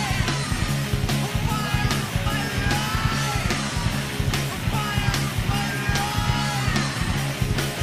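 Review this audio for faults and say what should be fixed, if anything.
Nothing here needs fixing, since there are no faults to point to anywhere in the clip.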